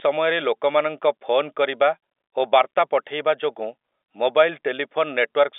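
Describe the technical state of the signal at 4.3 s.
At 4.3 s the audio is intact, with no fault at that moment, and the speech carries the narrow telephone band of G.711 coding, with nothing above about 3.8 kHz.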